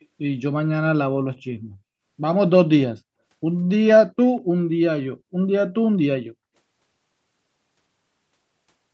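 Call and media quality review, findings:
Echo leak, 0.00–0.05 s: very faint delayed copy of the speech, trailing by about 194 ms and well below the direct signal. Likely cause: far-end loudspeaker pickup not fully removed by that side's echo canceller, so the residual was sent back. Brief and low-level, heard against speech band-limited at 8 kHz by the Opus call path.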